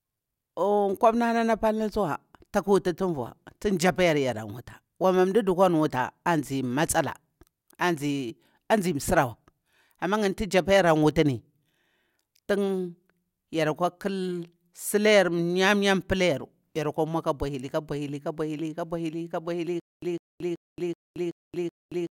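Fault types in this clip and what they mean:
Stutter with silent gaps: from 19.8 s to the end, a 153 ms burst of speech repeats six times at a steady 378.5 ms period, separated by 225 ms of digital silence, likely from a stalled stream replaying its last fragment. The intended audio is lost.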